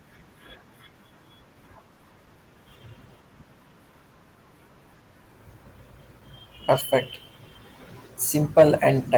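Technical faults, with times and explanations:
8.58 to 8.63 s, hard clipping: for about 50 ms near the end, the speech runs roughly 3 dB hotter than the stage in front of it can pass, so the waveform peaks get sheared off flat. Those squared-off tops throw extra harmonics high up the spectrum, which is why you hear a short, gritty crackle riding on the loudest bit. Light Opus coding damage is there across the clip.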